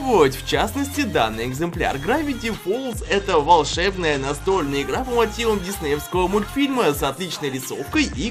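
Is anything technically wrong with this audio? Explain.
Yes. A Bluetooth SBC bit pool drop occurs from 2.91 to 4.60 s and again from 7.95 s to the end. The link congests, so the encoder starves high sub-bands. The treble dulls and gritty noise rises, which fits a fall from bit pool 31 to 11, around 83 kbps.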